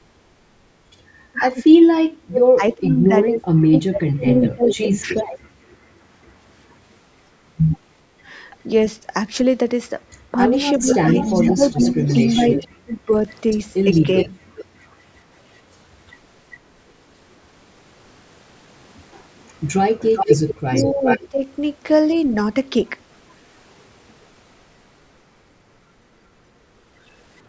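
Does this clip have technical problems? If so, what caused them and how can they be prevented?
Yes. In the background gated by the echo canceller, the room sound drops by about 14 dB for the first 0.07 s, then returns. The canceller clamped the microphone while the loudspeaker was playing. Letting the canceller converge before gating, or using gentler suppression, prevents this.

With speech suppressed in double talk, the talker dips by around 30 dB or breaks up in pieces from 1.32 to 5.47 s, 10.32 to 14.45 s and 20.18 to 22.32 s. That adds up to roughly 3 s, 1.5 s and under a second. The likely cause is the canceller failing to tell the talker from loudspeaker echo while both sides spoke, so it turned everything down. A headset or a canceller with better double-talk detection prevents it.

As an echo leak, a delayed copy of the voice trails the original by 397 to 408 ms. It is a faint scrap around 30 dB down at 2.88 to 2.93 s, and louder stretches around 10 dB down at 4.44 to 5.76 s and 10.1 to 14.96 s. 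From 19.39 to 22.2 s it is only about 5 dB below the speech. This is likely loudspeaker sound reaching the microphone on the loudspeaker side and escaping its canceller. Lower speaker volume or a headset at that end prevents it.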